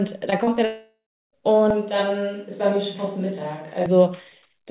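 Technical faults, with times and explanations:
0.30–0.34 s, 0.44–0.49 s and 0.55–0.59 s, short concealed packet loss: Three small gaps arrive in quick succession, about 20 ms, 40 ms and 20 ms of audio missing. Each time the receiver had nothing to decode, so it extended the preceding sound, repeating its pitch period or shaping noise to match, then crossfaded into the next real packet. That produces brief smears and wobbles within the narrowband, 4 kHz-limited call sound, and any very short consonant in those spots can disappear.
0.65–1.35 s, long network dropout: About 0.68 s of audio never arrived, most likely because the network stalled. The receiver first kept the last sound going as a synthetic buzz or hiss that fades away. Once that extrapolation ran out, roughly the final 0.34 s of the gap is silence or faint steady noise. The sound then resumes further along, with the missing stretch skipped rather than delayed.
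1.70–3.86 s, switch to a distant microphone: For just over two seconds the sound abruptly turns roomy and hollow, with thinner low end, which points to the close microphone dropping out and a farther pickup taking over. The level falls by about 5 dB and room noise rises to roughly 35 dB below the speech, because the remote microphone hears more of the space relative to the talker. The return to the close sound is just as sudden.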